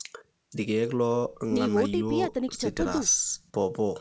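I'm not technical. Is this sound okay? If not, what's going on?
Yes, nothing's wrong here.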